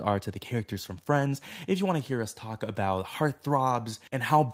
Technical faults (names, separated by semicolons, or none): none